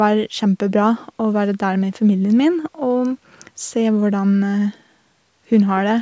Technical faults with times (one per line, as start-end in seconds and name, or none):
none